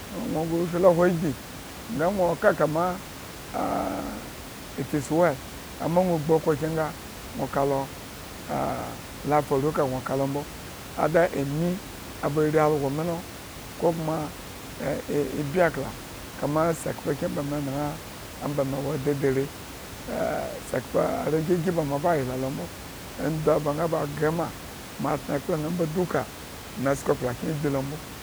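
No faults are audible anywhere in the speech; the room noise sits about 14 dB below it and belongs to the recording itself.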